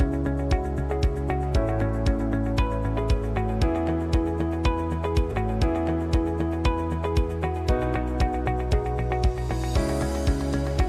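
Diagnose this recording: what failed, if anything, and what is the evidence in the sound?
The stream player queued the same segment twice, a stream segment repeated: from 5.31 to 7.31 s, two seconds of sound replay, with a small blip at the jump back.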